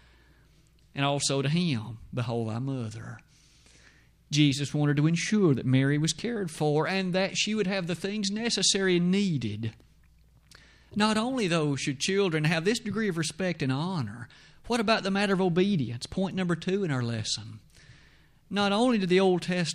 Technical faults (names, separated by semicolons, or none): none